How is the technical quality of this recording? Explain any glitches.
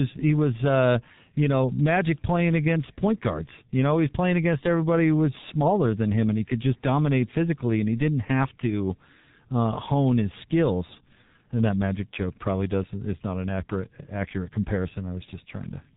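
Quality is poor throughout, because the speech has been squeezed through the G.723.1 codec. Its heavy damage points to a very low bitrate near 6 kbit/s, with long 30 ms frames and slow model updates, so consonants blur, the voice turns hoarse, and nothing survives above 3.8 kHz, leaving a muffled sound.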